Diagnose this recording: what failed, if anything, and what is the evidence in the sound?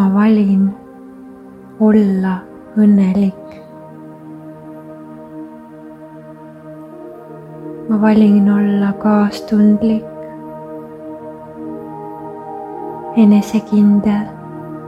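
Nothing in the recording points to a failure at any stage of the chain. There is no event in the sound that would call for a diagnosis.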